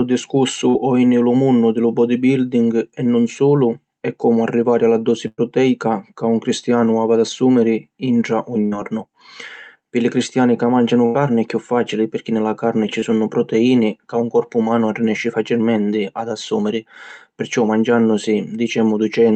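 At 0.69 to 0.75 s a short concealed packet loss leaves a brief smear: about 40 ms of audio never arrived in time, and the decoder filled it by extending the preceding sound before blending back into the real signal.

Bursts of packet loss follow at 5.27 to 5.40 s, 8.66 to 8.74 s and 11.06 to 11.16 s. In each, several consecutive packets were lost, and concealment held the last sound and let it decay. The first burst fills about 100 ms, with around 30 ms of near-silence. The second fills about 60 ms after "ad assùmiri intra un". The third fills about 86 ms between "li cristiani ca màngianu" and "è cchiù fàcili pirchì". In each case audio resumes with the intervening material gone.

At 13.00 to 13.04 s, between "ni la carni ci" and "sunnu proteìni ca lu", a second short concealed packet loss leaves a brief smear about 20 ms long. Throughout, the call codec's band limit is audible as a cut-off near 8 kHz.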